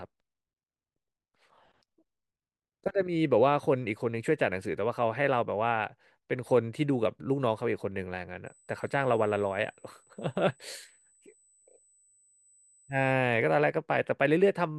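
From 8.46 to 13.12 s a USB whine sits under the speech: fixed-pitch tones at 8 kHz and, strongest, 16 kHz, about 25 dB below the speech. It comes from 125-microsecond bus microframes leaking through power or ground. On a spectrogram it shows as steady horizontal lines.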